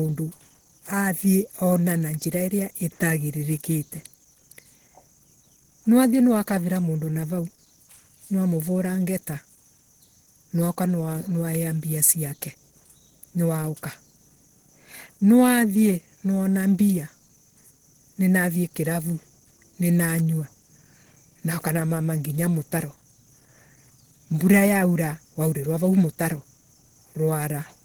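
Speech with plainly audible Opus compression throughout: a hoarse, muffled quality, while content still extends to about 20.2 kHz. This likely comes from Opus running in its hybrid speech mode at a low bitrate, consistent with roughly 16 kbps.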